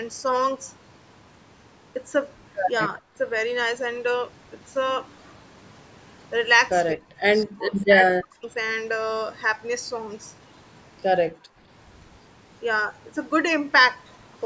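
The talker's speech drops sharply at 3.06 to 3.1 s, 6.94 to 7.08 s, 7.45 to 7.89 s and 8.11 to 8.49 s. This is speech suppressed in double talk. The first dip is brief and shallower, about 25 dB. The later ones go deeper, about 35 to 40 dB, and last up to nearly half a second. The voice dips, thins or breaks into pieces. The likely cause is both sides talking at once, so the echo canceller mistook the talker for loudspeaker echo and turned everything down.

From 11.29 to 11.61 s the background is gated by the echo canceller. The room sound falls by about 39 dB for roughly a third of a second, then returns. The canceller clamped the microphone while the loudspeaker played and released it afterwards. The band stops at 8 kHz throughout, as call microphone processing would give.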